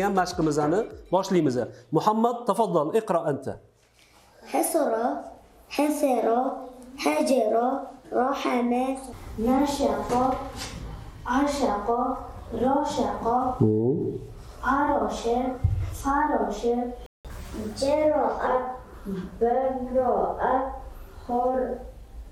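At 17.06 s the sound cuts out abruptly. This is a playback stall. The output stays silent for about 0.18 s, until 17.25 s. The likely cause is that the player ran short of data or its audio thread was briefly blocked, so nothing reached the output. The gap falls mid-flow, not at a natural pause. It sounds like a short hole punched into the audio.

From 17.25 s to 18.47 s comes catch-up at higher speed. The player resamples its backlog to recover the lost time. Playback runs at 1.15 times normal speed. Because speed and pitch are tied together here, the pitch rises too, by about two semitones. The sound seems hurried and slightly squeaky for just over a second. It then drops back to normal speed and pitch at 18.47 s.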